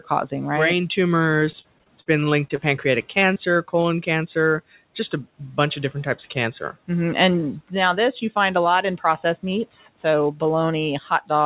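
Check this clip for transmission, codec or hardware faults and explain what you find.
Two bursts of repeated packet loss (robotic sound) break up this speech, from 1.4 to 2.6 s and again from 3.2 to 3.86 s. Packets went missing or arrived too late several times in close succession, and each hole was filled by stretching out the sound that came before it. In the first burst about 16% of the stretch is concealed and the longest gap is 41 ms. In the second about 13% is concealed, with gaps up to 26 ms. Both come out choppy, with small pieces missing. Room noise sits about 26 dB below the speech. Over the call path nothing comes through above 4 kHz, which fits a G.711 narrowband codec.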